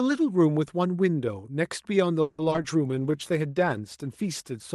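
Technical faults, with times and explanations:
2.21–2.64 s, repeated packet loss (robotic sound): five gaps patched by stretching prior audio, about half this span concealed, leaving choppy sound with pieces missing.
2.87–4.70 s, call bitrate drop: Opus falls from 64 to 18 kbps for about 1.7 s, coding coarsely and sounding rough, watery or muffled.
2.91–3.29 s, jitter buffer slow-down: receiver repeats pitch periods to rebuild its reserve, adding 59 ms, so audio drags at 87% speed with unchanged pitch.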